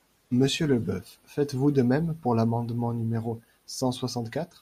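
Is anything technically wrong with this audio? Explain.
No, the speech signal shows no technical faults.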